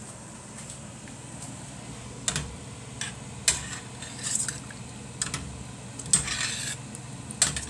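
No technical faults can be heard anywhere in this recording; the signal stays intact throughout.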